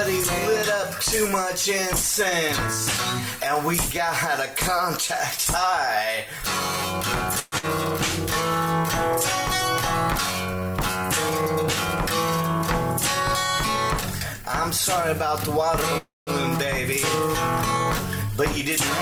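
At 7.39 to 7.66 s the audio carries its last sound on as a fading buzz or hiss for about a quarter second without falling silent, then resumes with roughly 120 ms skipped. This is likely a long network dropout, with the playout delay shifting by around 50 ms. From 10.55 to 10.72 s the sound drags at about 79% speed with unchanged pitch, stretched by 43 ms through repeated pitch periods or bits of pauses. This is a jitter buffer slow-down, rebuilding its reserve. At 15.97 to 16.30 s the sound again trails off into a fading buzz or hiss, with about 180 ms of silence at its end, then picks up exactly where it stopped with nothing lost. It is likely a call audio freeze: delayed packets emptied the buffer, inserting a 294 ms gap and pushing everything after it later.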